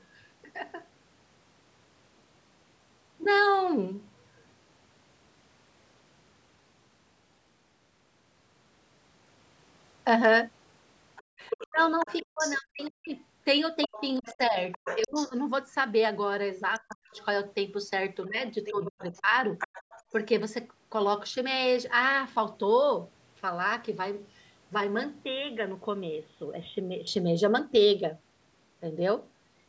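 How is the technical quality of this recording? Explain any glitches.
The speech is disturbed by three kinds of glitch between about 11 and 27 seconds.

From 11.16 to 12.89 s, 13.83 to 15.29 s, 17.1 to 17.25 s and 18.23 to 20.03 s, a faint second voice sits behind the talker, likely the other side's voice leaking through from an uncancelled loudspeaker echo.

At nearly the same times, 11.38 to 13.1 s, 13.87 to 15.37 s, 16.79 to 17.18 s and 18.28 to 19.32 s, the talker dips sharply or drops out, likely speech suppressed in double talk by the echo canceller.

From 25.24 to 27.07 s the sound turns dull and slightly quieter, with new background noise, likely the input switched to a poorer device.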